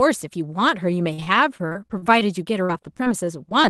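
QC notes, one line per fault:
1.13–2.23 s: repeated packet loss (robotic sound). About ten dropouts, up to 45 ms each, are patched by stretching the preceding sound, so the speech turns choppy. On a spectrogram this shows as smeared, repeated frames and brief blank notches.
2.65–3.66 s: repeated packet loss (robotic sound). Six shorter gaps, up to 38 ms, are again filled by continuing the last sound. The waveform shows clipped-off chunks and flattened, looped segments.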